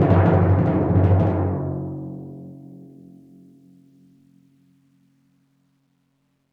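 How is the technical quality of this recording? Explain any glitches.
No glitches or technical faults are audible anywhere in this music recording.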